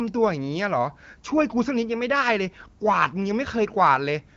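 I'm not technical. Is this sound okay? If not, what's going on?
Yes, this sound is okay, with nothing going wrong in it.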